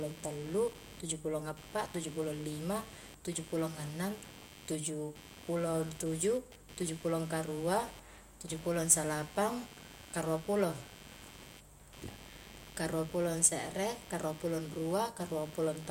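From start to finish, computer activity noise sits under the speech: a gritty, buzzing chirp pulsing at around a hundred times per second, roughly 20 dB below the voice. Load swings in the computer are shifting the ground reference shared with the audio circuit, so the interference follows machine activity rather than the talker. A spectrogram shows evenly spaced vertical streaks and a comb of harmonics near multiples of 100 Hz, continuing through pauses, where the waveform shows a fine spiky texture.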